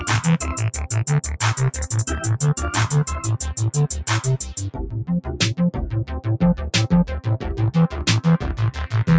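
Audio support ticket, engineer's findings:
Noise suppressor applied to music or sounds, throughout. Held tones and tails duck by around 10 dB; attacks pass. Pumping, thinning. Speech-tuned suppressor misreading sustained content as noise. Call microphone processing upstream, band-limited to 8 kHz.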